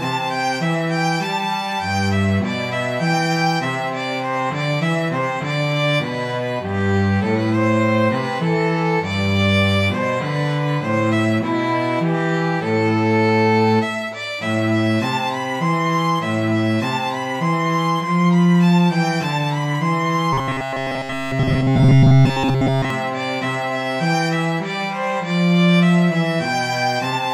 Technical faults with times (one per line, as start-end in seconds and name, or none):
20.33-22.90 robotic sound from repeated short buffers